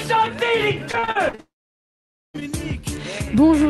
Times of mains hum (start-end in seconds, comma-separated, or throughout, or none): none